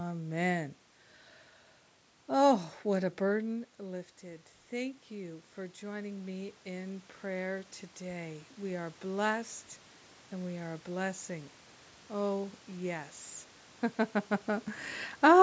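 Just after "what a", from 3.49 s to 9.05 s, automatic gain rising can be heard. The input fell by about 13 dB when the talker drew back from the microphone shortly before, and the gain control answered by climbing about 9 dB over five and a half seconds. What separates this from the talker simply moving is that the room noise swells along with the voice in a slow ramp, instead of the voice alone changing level.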